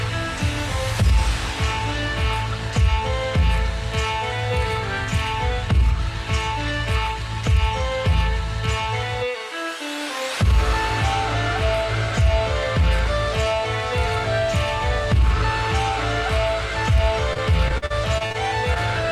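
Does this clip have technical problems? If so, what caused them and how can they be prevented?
Yes. From 17.33 to 18.36 s the sound turns choppy, with small pieces dropping out in quick succession. This is repeated packet loss, producing a robotic sound: nine gaps of up to 43 ms, about 200 ms in total, failed to arrive in time. Each gap was filled by extending the preceding sound, so roughly a fifth of that second is synthetic continuation rather than real audio. Preventing it means a more stable network path, with a wired connection, less competing traffic and forward error correction.

At 18.74 to 18.78 s there is a brief smear, like a tiny wobble. This is short concealed packet loss: about 20 ms of audio never reached the decoder, and the receiver bridged the hole by continuing the last sound, then blended back into the real signal. Because it comes just after the choppy stretch, it points to the same unsteady connection. 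A larger jitter buffer and redundant packet coding would help prevent it.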